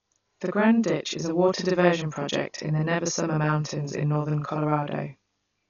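Channel delay (doubling) runs through the whole clip. One channel arrives about 40 ms behind the other, and once the two are summed to mono the late copy sits at equal level, so the speech sounds doubled, with a short slap trailing each syllable.

Dolby Digital compression is the likely cause of the heavy codec damage present throughout. Nothing is heard above 6.9 kHz, leaving the speech dull, and a rough, fluttering noise clings to voiced sounds where the encoder left many frequency lines unfilled, consistent with a low bitrate near 48 kbps.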